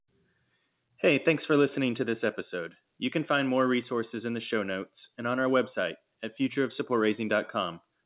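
No technical faults can be heard in the speech. It has passed through a WebRTC call path whose narrowband telephone coding, consistent with G.711 A-law, leaves nothing above 4 kHz and gives the familiar muffled phone-line sound.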